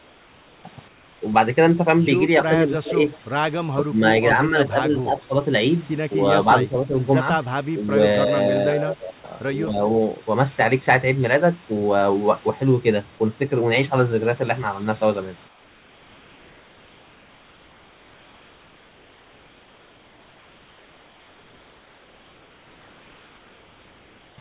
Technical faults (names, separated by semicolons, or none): comfort noise in place of the background; echo leak; speech suppressed in double talk